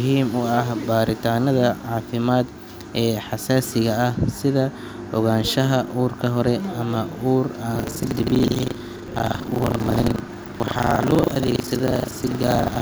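Speech, with buffer tearing from 7.72 s to the end. The writer and hardware reader have slipped out of step, so each 40 ms period carries roughly 30 percent stale audio, about 70 ms old, spliced in hard. The result is a robotic 25 Hz rattle.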